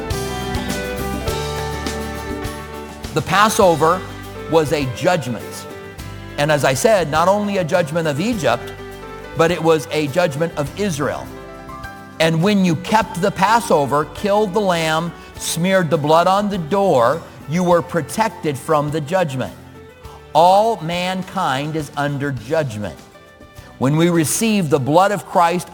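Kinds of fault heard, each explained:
Crude rate conversion: A gritty, inharmonic fizz rides on the sound for the whole clip, loudest on loud and bright passages, with tones that don't belong to the material. Samples were repeated or skipped rather than filtered to a new rate, and the regular pattern of that error points to a step from 44.1 kHz up to 48 kHz. The resulting distortion sits only about 25 dB below the signal.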